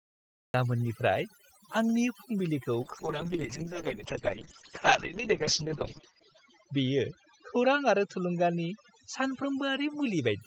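The clip opens on digital silence until about 0.54 s, when the speech cuts in mid-sound with no attack or fade. This is a cut-off start: capture began late, so the onset was never recorded. A gentle fade-in would rise gradually instead of appearing abruptly.

Throughout, overdone noise removal leaves the background almost silent, scattered with twinkling specks. The reduction pushed individual frequency bands down wherever they resembled its noise estimate, removing quiet speech detail along with the noise. Unlike codec damage, this effect is steady from start to end.

From 2.83 s to the end, a call bitrate drop makes the speech rougher and more muffled, consistent with an encoder falling from about 32 kbps to 6 kbps. The audio bandwidth narrows from 20 kHz to 8 kHz, and the coarsest stretch lasts 2.18 s. Because the degradation begins at a specific point, it is distinguishable from the constant noise-removal artefacts.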